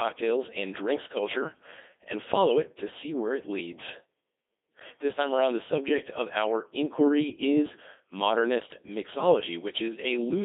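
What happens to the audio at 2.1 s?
At 2.1 s the speech is still passing through a Codec 2 vocoder, as it does for the whole clip. The waveform itself is not carried. Only pitch, voicing, energy and a rough spectral envelope survive, and the decoder rebuilds the voice from sine waves. The result is heavily robotic and buzzy. The damage fits a 2.4 kbit/s mode. The sound is also confined to roughly 250 Hz to 3.6 kHz, so it is thin and muffled.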